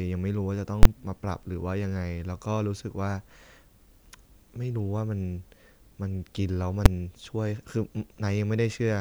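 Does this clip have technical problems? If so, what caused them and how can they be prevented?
Yes. Invalid numbers at full scale appear twice. At 0.83 to 0.85 s a 23 ms block sits flat at one extreme value, consistent with a 1024-sample block, producing a loud pop at each edge with silence between. At 6.86 s a shorter block, about 6 ms, gives a single bang. Both come from a calculation that produced infinite or invalid values, which were clamped to the maximum level. Prevent this by guarding divisions and feedback paths against zero or overflow, and by checking for invalid values before output.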